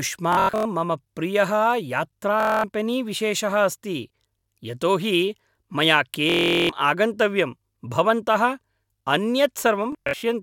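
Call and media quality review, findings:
Bluetooth stutter at 0.33–0.65 s, 2.40–2.64 s, 4.39–4.44 s, 6.30–6.69 s, 9.92–10.23 s: buzzy machine-gun repeats as the receiver replays its last buffer through lost packets, up to 395 ms lost. Not a dropout: the gaps fill with repeats instead of silence, and the audio resumes further on.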